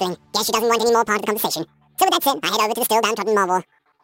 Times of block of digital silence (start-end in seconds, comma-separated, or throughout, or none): none